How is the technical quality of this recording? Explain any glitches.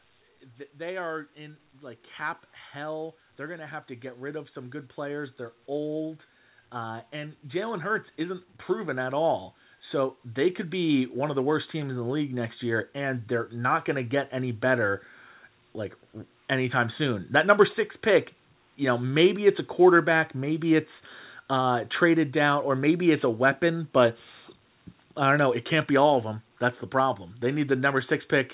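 The main glitch is a slow level climb in the speech at the start, heard through a narrowband call path that leaves nothing above 4 kHz, which points to a telephone-style codec.

From 0.44 s to 11.08 s, just before "of the worst teams", there is an automatic gain rising fault. The gain control judged the input too quiet and kept raising its gain, by about 17 dB in total. Voice and room noise swell together over ten seconds. That distinguishes it from a talker moving closer, which would lift the voice but not the background.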